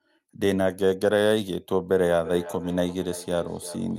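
From 1.91 s to the end there's feedback echo between two devices: the sound comes back roughly every third of a second, peaking about 15 dB below the speech. A second device in the room is replaying this microphone's signal, and the canceller can't remove audio it didn't play itself.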